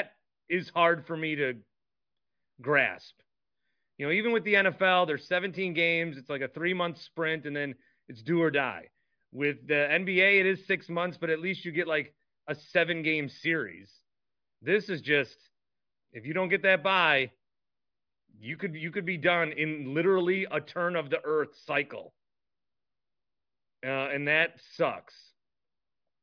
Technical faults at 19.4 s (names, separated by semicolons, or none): none